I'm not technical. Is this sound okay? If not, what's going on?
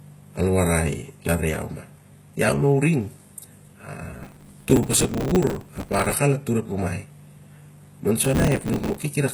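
No. Throughout the speech, the high end sounds synthetic. S sounds come out gritty or lispy, and nothing sits above about 12 kHz. This is likely HE-AAC compression, which keeps only the lower sounds and fakes the treble by copying lower parts upward, so it never quite matches.

There are also two bursts of processor overload crackle, from 4.23 to 6.13 s (ending just before "al atur ep rumai") and from 8.25 to 9.03 s. The computer couldn't keep up with tiny slices of audio, a few milliseconds each, and repeated stale bits instead. That is heard as a harsh, tearing crackle over the speech.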